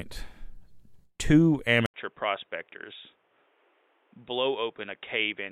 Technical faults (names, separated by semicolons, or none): input switched to a poorer device